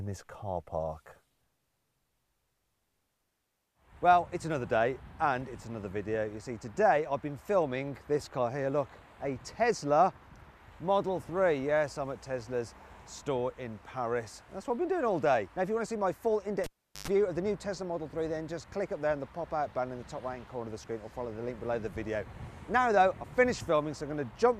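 Cable pulled and plugged in, 16.64 to 17.08 s: a pop, 0.39 s of near silence, then 0.10 s of 50 Hz mains buzz as the tip touches, and a closing pop.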